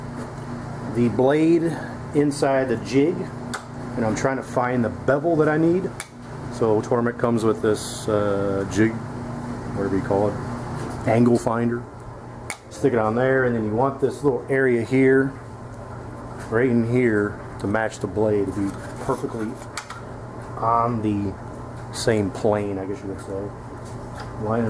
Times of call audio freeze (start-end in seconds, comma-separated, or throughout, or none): none